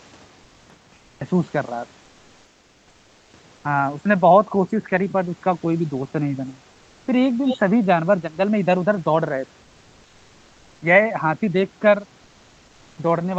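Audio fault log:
0.00–1.21 s, cut-off start: pure digital silence, then the speech jumps in mid-sound at 1.21 s with no attack or fade, as if capture began late.
2.05–3.33 s and 3.55–3.63 s, comfort noise in place of the background: the room tone turns flat and featureless, about 2 dB quieter, likely Opus DTX filling pauses with synthetic noise.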